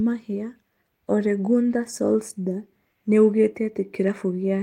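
A short recording of speech, with nothing technically wrong to report. No faults can be heard anywhere in it.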